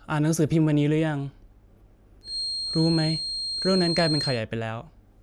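From 2.21 to 4.43 s a thin, slowly swelling and fading 4.2 kHz feedback whistle sits a few dB under the speech, likely a speaker-to-mic loop hovering right at the edge of feedback.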